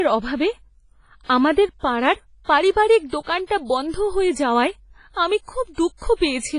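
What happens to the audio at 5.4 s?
At 5.4 s the speech carries the same washy, ringing quality heard throughout, with hiss swelling and fading with the signal and nothing above 10.4 kHz. This is likely heavy WMA compression, pointing to about 24 kbps, where long transform blocks smear quantisation noise and weak components are zeroed.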